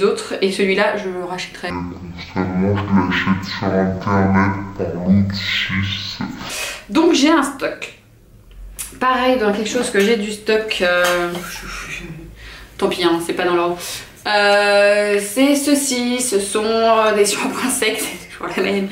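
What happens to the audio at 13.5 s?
Nothing goes wrong at 13.5 s; the audio plays through that point intact, with no dropout, click or distortion.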